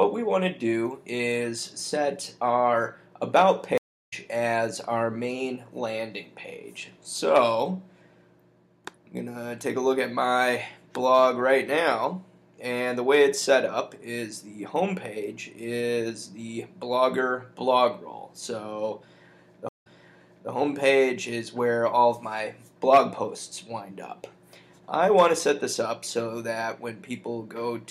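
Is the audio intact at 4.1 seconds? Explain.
No, a stream reconnect runs from 3.78 to 4.13 s: the connection dropped, leaving about 340 ms of silence, then a fresh decoder resumes the audio roughly 0.4 s further on.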